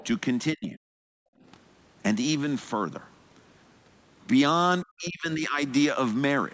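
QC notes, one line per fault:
0.00–0.07 s, other side's voice leaking through: a faint second voice sits about 25 dB under the main speech for the opening instant. This is likely loudspeaker playback picked up by the microphone, with some left behind after echo cancellation.
0.54–0.84 s and 4.82–5.61 s, speech suppressed in double talk: the talker's speech sinks sharply, by roughly 40 dB at its deepest, for about 0.3 s and then about 0.7 s. This is likely the echo canceller pulling down the microphone because it could not separate the talker from overlapping far-end echo.
1.12–1.43 s, background gated by the echo canceller: the room sound drops away by about 40 dB for roughly 0.3 s, then comes back. The canceller clamped the microphone hard while the loudspeaker was active, so the ambient bed briefly vanishes.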